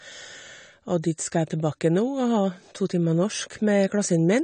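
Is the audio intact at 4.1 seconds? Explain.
No. AAC compression affects the whole clip, so it is present at 4.1 s as well. Nothing reaches above 9 kHz, and the speech sounds plainly dull, smeared and warbling. The likely cause is AAC-LC at a low bitrate, which fits roughly 32 kbps. The encoder quantises each frame's frequency lines against a hearing model. With so few bits, it lowers the cut-off and thins or drops upper detail, leaving sibilants fizzy and blurred.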